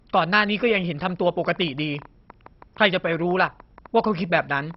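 MP2 compression runs through the whole clip. The speech has nothing above 5.6 kHz, and the remaining bands are heavily damaged, which is likely the work of an MPEG Layer II encoder at a low rate, around 32 kbps. That codec divides the spectrum into equal sub-bands. When bits run short, it switches off the top bands and quantises the rest coarsely. The voice comes out dull and muffled, with a gurgling, grainy texture as bands drop in and out.

A train of clicks starts at 1.45 s and continues until 4.75 s, close to the end. There are about thirty sharp pulses of similar shape at roughly 8.5 per second. The spacing is irregular rather than metronomic. They peak at roughly the level of the speech itself, so they stand out as a ragged ticking that sits on top of the voice and carries through the pauses. The likely source is an interfering device or a faulty connection or power supply.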